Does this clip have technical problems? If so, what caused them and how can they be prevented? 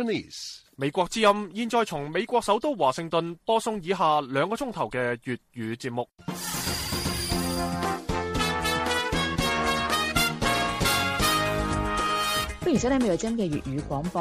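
No, the signal holds steady throughout, with nothing in it that points to a recording, transmission or playback problem, so there is nothing here that needs preventing.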